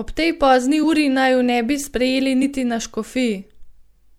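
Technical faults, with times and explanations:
0.83 s and 2.42 s, compressed frames skipped: the sound jumps forward just after "tej pozni" and again after "bi sprejeli." Roughly 50 ms and 30 ms of audio go missing, about two frames and one frame, which fits frames of about 26 ms. The decoder's overlapping frames blend each join into a short smeared blip. A dropout would leave audible silence and a cut would give a sharp click; these leave neither.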